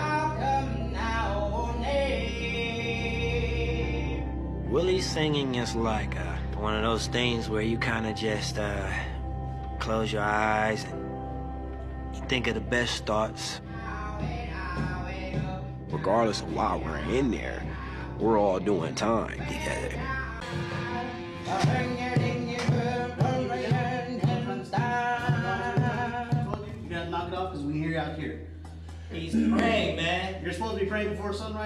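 Two loud pops sit on top of the sound, at 26.54 to 26.56 s and 29.59 to 29.61 s, peaking roughly 15 and 20 dB above the signal. Each is a single brief thump while the audio carries on unbroken beneath it, unlike a dropout's gap, pointing to a likely electrical pulse from a plug, switch or static.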